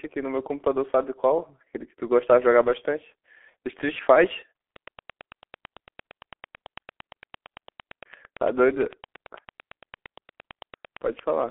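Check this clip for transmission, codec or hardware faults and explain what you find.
Two faults here. Throughout, it's G.723.1 codec damage. The speech is squeezed into roughly 300 Hz to 3.5 kHz with nothing above 3.7 kHz, and heavy 30 ms frame coding, consistent with a 6.3 kbit/s stream, leaves it muffled, hoarse and smeared on consonants.

From 4.76 s to 11.43 s there's a train of clicks: about seventy regular pops at 8.86 per second, peaking a few dB above the speech, likely from electrical interference or a struggling interface.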